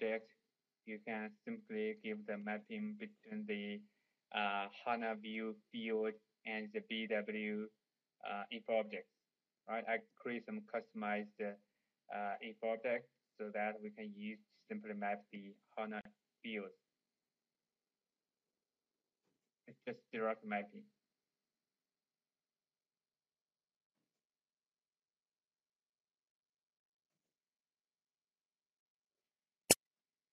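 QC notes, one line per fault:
Throughout: MP3 compression. The encoder likely ran short of bits, so it cut the treble at a fixed point and dropped weak frequency lines frame by frame. The damage is plainly audible: a dull top end, watery swirling detail, and smeared attacks, which fits roughly 64 kbps.
16.01 to 16.05 s: gap at a join of encoded pieces. Two separately encoded pieces were joined without trimming the encoder's start delay and end padding. This leaves a gap of about 44 ms in continuous sound, with smeared edges, before the sound resumes where it stopped.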